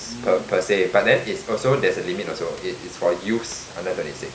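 No technical faults can be heard in the signal; the only thing under the speech is the recording room's own background, sitting about 18 dB below it.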